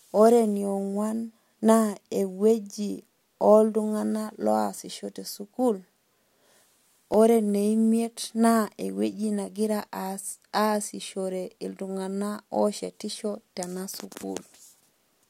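At 7.14 s the speech has a repeated buffer fault. Fresh audio reached the output late, so the device replayed its last block twice more: a piece about 1.45 ms long sounds three times in a row, with a hard join at each repeat. That length fits a 64-sample buffer. Because the piece is so tiny, the result is a brief click or buzz rather than a stutter. Unlike a dropout, there is no silent gap, and essentially no audio goes missing.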